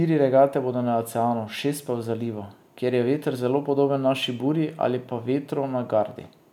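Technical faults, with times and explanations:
No technical faults detected in the recording.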